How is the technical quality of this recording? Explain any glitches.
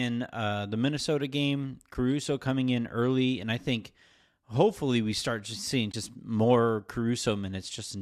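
Two brief dropouts stand out in this speech clip, and both are AAC frame loss with muting. The first is at 1.94 s, just before "coming in early and", and the second runs from 5.92 to 5.94 s, right after "we start just seeing". When AAC frames go missing, the decoder zeroes their spectrum. The overlapping windows then fade the sound down and back up, so you hear a brief dip and a soft-edged hole. The first sounds like a single frame of about 10 ms and the second like two, about 20 ms. The faint coding texture underneath is likely the low-delay AAC path, lightly applied.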